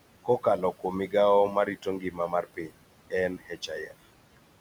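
Between phrases the background in this speech recording drops away, then swells back up under the talker. These are noise suppressor artifacts. The suppressor estimates the steady room noise, which sits about 18 dB below the speech, and turns down each frequency band it judges to be noise, frame by frame, by about 18 dB. As the speech starts and stops, those band gains keep switching, which produces the pumping. In two places the speech is cut by the noise suppressor, so parts of it sound swallowed or faint. The first is between 1.55 and 2.73 s, just after "kuom migao", where roughly 0.4 s of sound in total is pulled down, by about 16 dB at the deepest point. The second is between 3.38 and 3.92 s, where about a fifth of a second is lowered by up to about 14 dB. In both stretches the suppressor mistook soft parts of the speech for background and attenuated them along with the noise.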